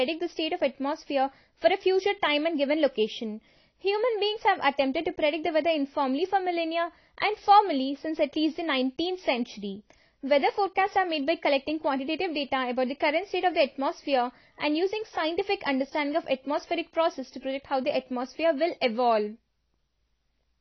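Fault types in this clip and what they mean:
AAC compression: the speech sounds dull and smeared with a warbly, fizzy edge on sibilants and nothing above 6.5 kHz, likely from low-bitrate AAC-LC coding.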